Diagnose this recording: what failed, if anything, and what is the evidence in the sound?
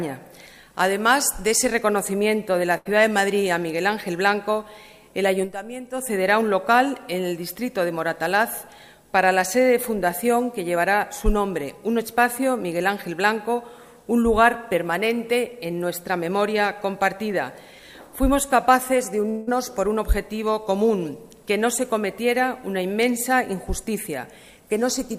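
At 2.77 s the sound is continued and fades for about 80 ms, then picks up at 2.87 s with that stretch skipped. This is a burst of packet loss on the network. The receiver hid the missing packets by repeating and attenuating the last audio it had.

At 19.29 s the sound turns into a decaying continuation lasting about 180 ms that never falls to silence, and it resumes at 19.49 s with that span gone. The likely cause is a long network dropout, with concealment stretching the last received audio across the gap.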